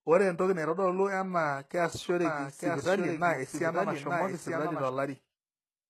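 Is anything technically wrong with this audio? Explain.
Yes. HE-AAC compression runs throughout, with plainly audible codec damage and nothing above 12.3 kHz. The treble is likely rebuilt from lower bands, which fits a very low bitrate around 16 kbps, leaving sibilants gritty and metallic.

A doubled audio track appears from 2.25 to 4.89 s. It is likely a second copy of the speech mixed in about a second late and roughly 5 dB quieter, starting and stopping abruptly, with no room colour.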